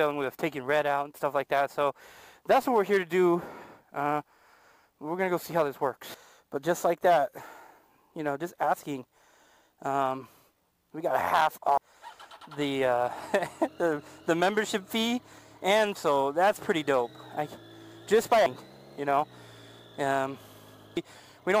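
Brief chirps or blips interrupt the audio at 0.35, 11.77, 15.95, 18.46 and 20.97 s. These come from damaged data in the compressed stream: corrupted bytes make the decoder misread frames and lose sync until it finds the next valid frame header.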